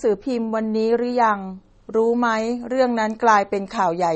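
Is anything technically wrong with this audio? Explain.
Yes. Throughout the speech, nothing is present above about 8.3 kHz, and the sound has a plainly audible watery, swirly texture. This is likely MP3 compression at a low bitrate, around 32 kbps. Short of bits, the encoder cuts the treble and switches weak frequency lines on and off between frames, smearing consonant attacks.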